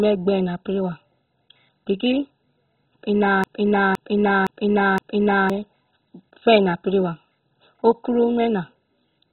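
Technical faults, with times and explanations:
Throughout, MP2 compression: the speech is dull and muffled, with nothing above about 4.1 kHz, and it carries a heavy gurgling, granular distortion. This is likely the result of MPEG Layer II coding at a very low bitrate, around 16 kbps. Starved of bits, the encoder switches off every upper sub-band, lets bands flicker on and off, and quantises the remaining ones so coarsely that they become audible as watery grit.
3.44 to 5.50 s, broken-record loop: a fragment of about 0.51 s plays four times back to back, exactly identical each time, so the speech stutters mechanically instead of moving forward. This likely happens when the player or stream stalls and keeps re-sending the last piece of audio held in memory. Whatever should have been heard during those two seconds is gone, replaced by the repeats.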